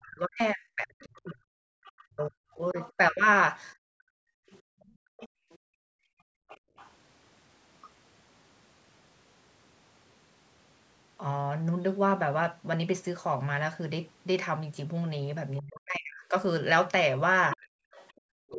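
From the start to 3.26 s the speech keeps dipping, by about 40 dB at its deepest and for roughly two seconds in all. That's likely speech suppressed in double talk: with both ends talking at once, the echo canceller couldn't tell the talker apart from the loudspeaker echo and turned everything down. Between 1.16 and 2.92 s a faint second voice sits underneath, about 20 dB below the talker. That's likely the other side's voice leaking through, played on the loudspeaker and not fully removed from the mic. At 1.73 s the room tone drops out for about 70 ms, by about 40 dB. That's background gated by the echo canceller, clamping the mic hard while the far end played. The same gating returns from 3.75 to 6.76 s, with the far voice leaking again from 4.49 to 6.9 s at about 25 dB down. From 15.6 s to the end the talker is ducked again, for about 700 ms in total. The leak is back from 17.52 to 18.2 s, louder this time at about 15 dB below the speech, and the background gates again from 17.58 to 18.22 s.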